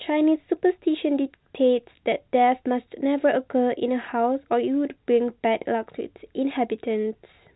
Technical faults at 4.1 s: none

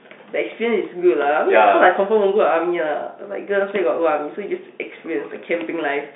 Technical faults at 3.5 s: none

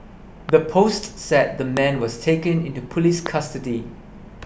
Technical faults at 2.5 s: none

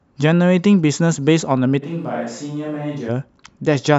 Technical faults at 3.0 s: switch to a distant microphone

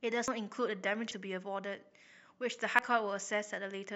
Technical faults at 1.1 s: dropped buffer (overrun)

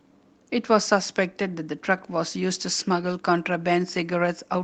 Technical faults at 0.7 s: lost packet rebuilt from error correction

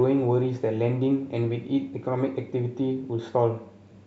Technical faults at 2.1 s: none

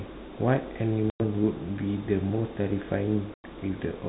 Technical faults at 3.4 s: packet loss on an ADPCM call

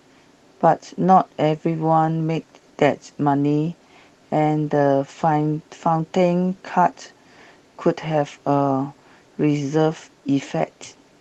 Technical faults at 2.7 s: none

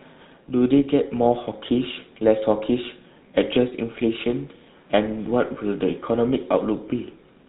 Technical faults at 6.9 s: GSM full-rate codec

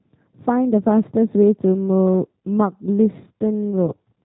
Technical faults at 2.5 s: G.729 codec

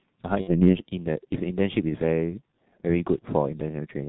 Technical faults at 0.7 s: G.723.1 codec; VoIP packet loss concealed by the speech codec

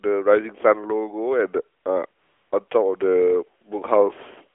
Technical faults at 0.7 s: automatic gain rising

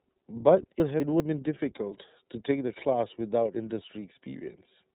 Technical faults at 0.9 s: iLBC codec; chunks out of order

